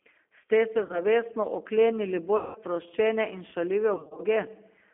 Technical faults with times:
0.00-4.93 G.729 codec
0.83-1.01 VoIP packet loss concealed by the speech codec
2.37-2.59 VoIP packet loss concealed by the speech codec
3.96-4.21 VoIP packet loss concealed by the speech codec

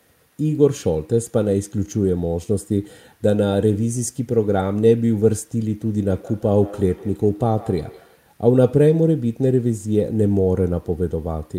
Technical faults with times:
5.89-8.28 feedback echo between two devices

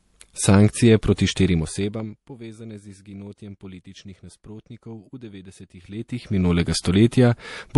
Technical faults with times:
0.00-7.78 MP3 compression
1.16-1.18 pre-echo
5.76-6.59 zipper noise
6.82-6.85 pre-echo

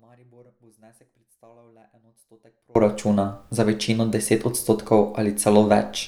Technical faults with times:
0.00-2.75 one channel inverted

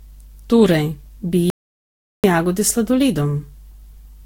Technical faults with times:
0.00-4.25 generation loss
1.50-2.24 audio dropout to silence

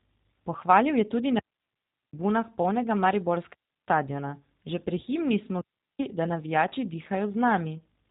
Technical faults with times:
0.00-8.11 G.729 codec

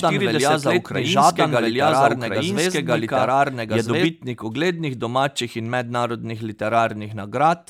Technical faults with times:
0.00-4.06 doubled audio track

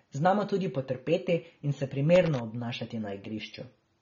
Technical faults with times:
0.00-4.01 AAC compression
2.15-2.39 loose connector crackle

